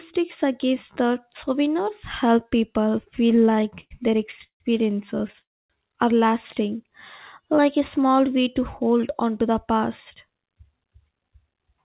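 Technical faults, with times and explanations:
3.28–4.62 s, repeated stalls (stutter): the speech keeps catching and holding, with 16 brief hangs adding up to about 401 ms, the longest 164 ms, so roughly 30% of this stretch is filler. Packets were arriving late or too slowly, so the jitter buffer ran dry again and again and the receiver stretched the last sound each time. Nothing is lost, which is why it drags rather than skips. Unlike a single freeze, the interruptions are many and short.
5.39–5.72 s, call audio freeze: one sustained hold of about 302 ms, where the last sound is carried on briefly and then fades into about 260 ms of silence before the speech resumes exactly where it stopped. The likely cause is packets held up in transit long enough to empty the jitter buffer, so a gap was inserted with nothing missing. What separates it from the stutter is a single long stop instead of a string of short catches.
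6.70–6.90 s and 7.42–8.28 s, jitter buffer slow-down: the speech runs slow at unchanged pitch, at 85% speed in the first stretch (37 ms added) and 93% in the second (62 ms added), with sounds drawn out. The receiver was rebuilding its reserve by repeating single pitch periods or bits of pauses many times over. Because pitch stays put, this is not a tape-style slowdown, and because nothing halts, it is not a stall.
10.15–11.81 s, jitter buffer speed-up: the speech runs at 113% speed and sounds hurried, with roughly 200 ms trimmed out, yet the pitch stays the same. The buffer had built up more audio than its target, so the receiver cut short pieces of one or a few pitch periods over and over to lower the delay. It mirrors the slow-down: material is removed rather than repeated, and the band-limited G.711 sound, with nothing above 4 kHz, carries on through it unchanged.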